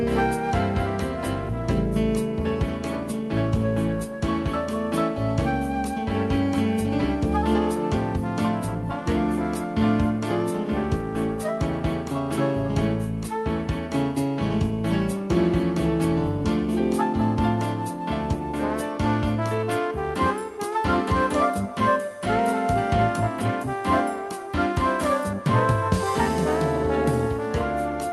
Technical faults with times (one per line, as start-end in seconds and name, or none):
none